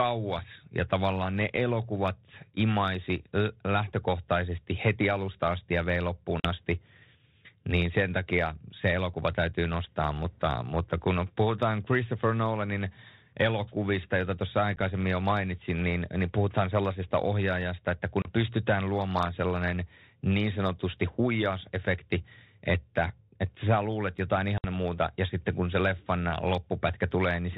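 Packet loss on an ADPCM call strikes at 6.40 s, 18.22 s and 24.58 s, cutting hard-edged silent holes of 40, 30 and 60 ms, each a few packets' worth. Because ADPCM sends only differences from a running prediction, the receiver's predictor and step size drift from the sender's during each gap. The speech then resumes with brief, slight distortion before settling, all within a band-limited sound that fits G.726 at 32 kbit/s.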